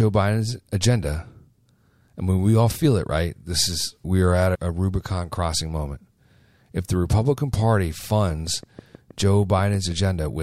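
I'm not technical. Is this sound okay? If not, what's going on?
No. A train of clicks runs from 8.30 s to 10.41 s: about fifteen evenly spaced ticks, roughly six per second, about as loud as the speech. They likely come from electrical interference from nearby equipment, or a faulty connection or power supply.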